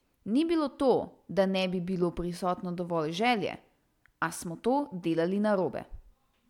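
Nothing in this recording stands out as a technical fault, so there's really nothing here to pick apart.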